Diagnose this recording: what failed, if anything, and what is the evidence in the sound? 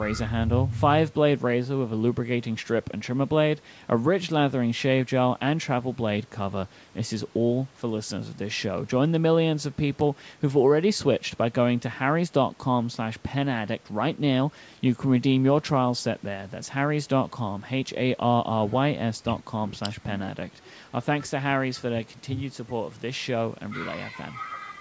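Nothing failed; no faults heard.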